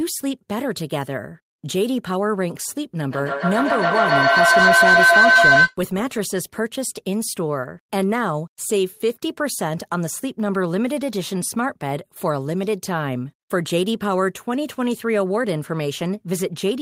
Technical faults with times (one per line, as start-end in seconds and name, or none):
3.11-5.78 feedback howl